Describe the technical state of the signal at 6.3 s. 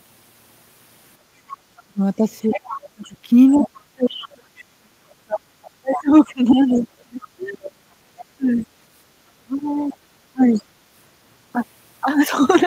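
At 6.3 s, two faults overlap. The first is speech suppressed in double talk, running from 1.55 to 8.53 s. The echo canceller likely could not tell the talker apart from the loudspeaker echo while both sides spoke, so it pulled the whole microphone signal down. The talker's speech dips and breaks up in patches, about four seconds of it in total across that span, with the deepest cuts falling around 35 dB.

The second is the other side's voice leaking through, from 5.63 to 8.65 s. The loudspeaker sound picked up by the microphone was likely not fully cancelled, so a residue of the far-end talker passes into the signal. At 6.3 s this leak sits roughly 15 dB below the talker's speech, a second voice heard faintly underneath while the talker's own speech is being ducked.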